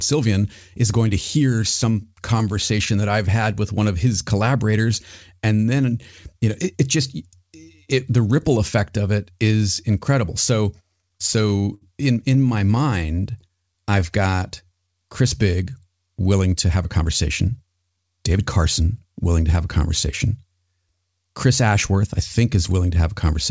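Between 11.02 and 11.83 s, and again from 12.25 to 13.51 s, the speech shows repeated stalls (stutter). Packets arrived late, so the jitter buffer kept running dry. The receiver stretched the last sound over each gap, with 143 ms and 142 ms filled in and nothing lost. The gaps in the first stretch reach 69 ms, while those in the second stay within 16 ms, giving a choppy, dragging rhythm. Overlapping the tail of that, from 13.2 to 14.93 s, a jitter buffer slow-down repeats pitch periods to rebuild reserve. It adds 194 ms, playing at 89% speed with unchanged pitch, so sounds are drawn out. A jitter buffer speed-up follows at 16.76–17.06 s and 17.46–18.82 s, running at 112% and 111%. About 50 ms and 150 ms of pitch periods are trimmed to shed excess delay, and the speech sounds hurried. Throughout, nothing is heard above 8 kHz, which fits a wideband call codec such as G.722 on the call path.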